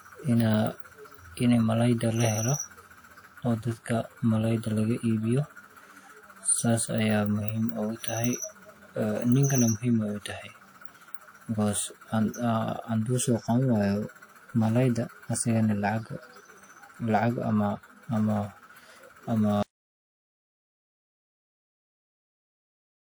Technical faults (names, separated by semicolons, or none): audio dropout to silence